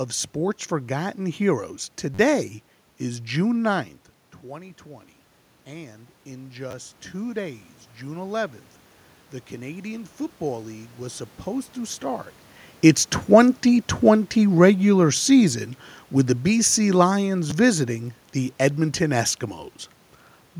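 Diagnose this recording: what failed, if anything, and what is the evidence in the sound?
Short stutters at 2.14 to 2.19 s, 6.71 to 6.73 s and 17.50 s, each a tiny fragment heard two or more times with hard joins. This is a repeated buffer at the driver or buffer stage. Each repeat lasts about 10.7 ms, which fits a 512-sample buffer. The first event repeats four extra times and loses about 40 ms of audio.

From 4.46 to 12.05 s, speech and room noise swell together slowly, by about 9 dB in all. This is automatic gain rising in call processing. After the talker moved back around 4 s, the input fell about 15 dB, and the gain control climbed gradually to compensate.

From 13.24 to 17.88 s, the level starts loud and sinks steadily, taking the background with it, by about 5 dB. This is automatic gain falling in call processing. After the talker moved around 12.5 s, the gain control found the input too loud and pulled back.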